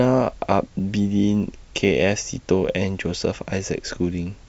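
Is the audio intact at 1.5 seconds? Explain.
No. At 1.5 seconds the speech carries a steady train of small ticks, about 20 per second, under the voice, and it runs the whole clip. This is a resampler restarted on every block: the 48 kHz to 44.1 kHz conversion handled each 50 ms block separately, so at every block edge the filter lacked the true neighbouring samples and left a small error there, recurring at the 20 Hz block rate.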